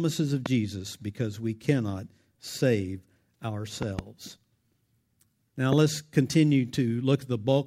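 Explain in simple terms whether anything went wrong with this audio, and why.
Three loud pops cut through the speech, at 0.46–0.48 s, 3.82–4.01 s (a quick double) and 5.73–5.75 s. They likely come from sudden electrical jolts, like a plug, switch or static.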